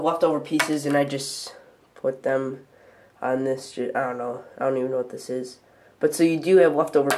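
No technical faults can be heard anywhere in the audio.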